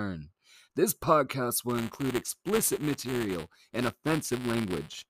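From 1.69 s onward, buffer tearing splices a sliver of audio about ten milliseconds old into each period. The hard joins make a 200 Hz rattle.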